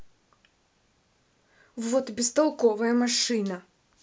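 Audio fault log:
No technical faults can be heard anywhere in this speech recording.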